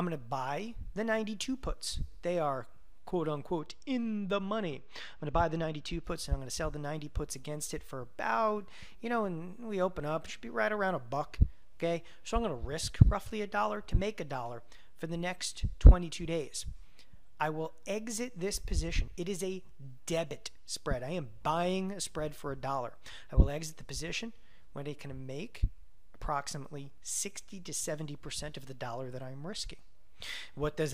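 From 3.60 to 6.04 s one channel runs late by a couple of samples, a tiny fraction of a millisecond, before the two are summed. This channel delay causes comb filtering: a notch near 10 kHz dulls the top end, making the sound muffled.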